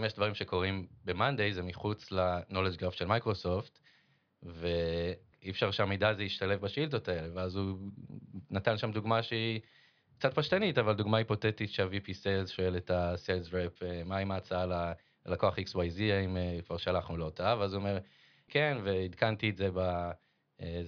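No technical faults are audible anywhere in this speech.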